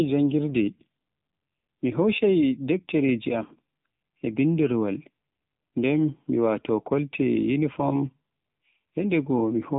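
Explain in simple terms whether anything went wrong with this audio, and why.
Something did go wrong, and it runs through the whole recording: the speech has been squeezed through the AMR narrowband mobile codec, the one old 2G and 3G phones use. It throws away everything above about 3.8 kHz, so the voice loses its crispness, and it rebuilds the speech from a rough model of the mouth and throat. Here that rebuilding is plainly audible, giving the voice a buzzy, synthetic, phone-call quality from start to finish.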